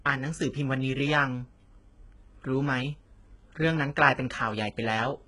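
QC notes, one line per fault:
Throughout, HE-AAC compression: s sounds gritty and lispy, nothing above 11 kHz, likely from low-bitrate coding rebuilding the treble by copying lower bands upward.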